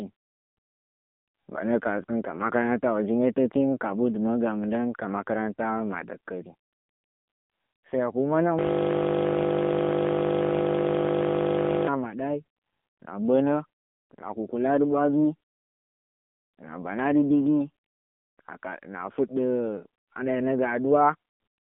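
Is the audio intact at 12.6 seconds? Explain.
No. At 12.6 seconds the speech carries AMR narrowband mobile codec damage, which runs through the whole clip. Nothing above 3.8 kHz survives, and the line band sits at 200 Hz to 3.6 kHz. The coarse vocal-tract model leaves a plainly buzzy, synthetic edge, which fits a low mode near 8 kbps. A simple telephone filter would only muffle the sound without adding that buzz.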